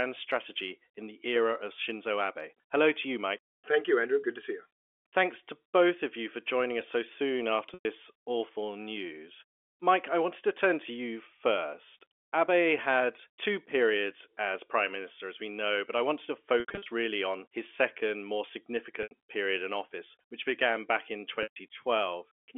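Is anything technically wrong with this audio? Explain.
Yes, there are four short packet-loss dropouts with pitch repetition at 7.74 s (110 ms), 16.6 to 16.86 s (200 ms lost in scattered bursts), 19.03 s (80 ms) and 21.43 s (130 ms). The sizes fit 10 ms packets. The receiver loops the last pitch period, so each gap sounds briefly held and buzzy before fading out.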